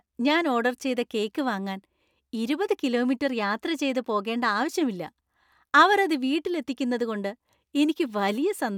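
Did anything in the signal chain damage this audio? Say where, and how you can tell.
No, nothing audible in this speech points to damage at any stage of the chain.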